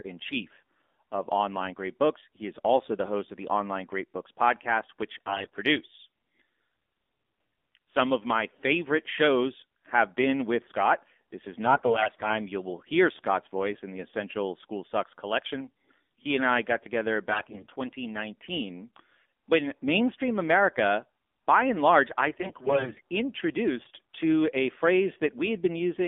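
The whole speech clip carries the AMR narrowband mobile codec. The band runs only from 250 Hz to 3.6 kHz. The voice sounds buzzy and synthetic, which fits a low rate near 7.4 kbps.

AMR bit errors strike at 5.26 to 5.57 s, 11.66 to 12.39 s, 17.30 to 17.73 s and 22.38 to 23.01 s. Corrupted frame data misplaces the excitation pulses. Pitch and level hold, but the voice turns hoarse and gargly, worst in the first burst.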